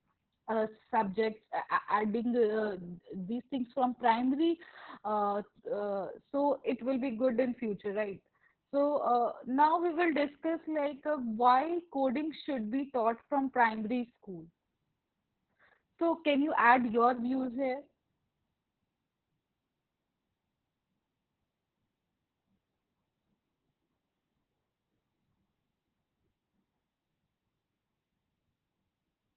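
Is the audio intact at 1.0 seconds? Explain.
No. At 1.0 s, as throughout the speech, the audio carries heavy Opus voice compression. The SILK linear-prediction coder is running narrowband, which fits a very low bitrate near 6 kbps, so the excitation is coded coarsely and the voice sounds muffled, hoarse and slightly robotic. On a spectrogram, energy stops at a flat ceiling at 4.2 kHz with empty space above.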